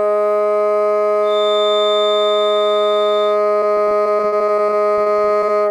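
From 1.2 to 3.4 s there's a thin feedback whistle at 3.6 kHz, sitting roughly 10 dB under the music and swelling and fading slowly in level. It's likely a speaker-to-mic loop hovering right at the edge of feedback, ringing without ever running away.

Then from 3.59 to 5.5 s you get repeated packet loss with that robotic sound: a string of short holes, which fits around twenty lost packets, the longest 53 ms. Each is patched by stretching the previous sound, so about a quarter of the stretch is concealed, and it comes out choppy.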